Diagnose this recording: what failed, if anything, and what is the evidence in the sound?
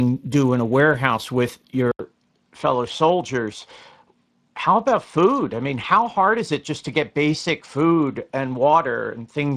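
Speex codec, throughout: at the codec stage, the CELP excitation gets too few bits, so speech is hoarse and noisy, with nothing above 15.4 kHz, which fits roughly 22 kbps.

Input switched to a poorer device at 1.91 s, after "in a warehouse with": an 80 ms gap, then nothing above 9.8 kHz and faint new noise, likely a driver-level change.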